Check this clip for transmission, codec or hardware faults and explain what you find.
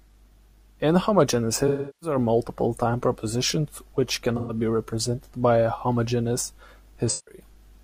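AAC frame loss with concealment occurs three times: 1.67 to 2.17 s, 4.36 to 4.55 s, and 7.08 to 7.41 s. Coded frames went missing. The decoder rebuilt each gap from the last good spectrum. Each patch sounds smeared, noisy or phasey.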